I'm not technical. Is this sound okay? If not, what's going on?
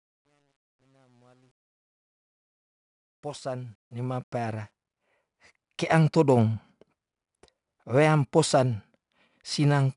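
No. There are two problems, and they sound different.

From 0 to about 4.72 s the speech fades in from silence. The quietest part, 0 to 3.0 s, sounds gritty. This is truncation distortion on a fade: the volume stage keeps too few levels, which fits about 10 bits, so very soft sound becomes coarse steps. It is worst when quiet and disappears once the speech is full volume.

Through the whole clip there is also 4-bit ADPCM compression. Each sample is saved as a rough step from a guess, so a gritty hiss rides on top of the louder speech and gets stronger as the voice gets louder. Sharp starts of sounds come out distorted. Nothing is present above about 10.6 kHz, so the sound is also dull. Unlike the fade problem, this grit is loudest on loud parts and never goes away.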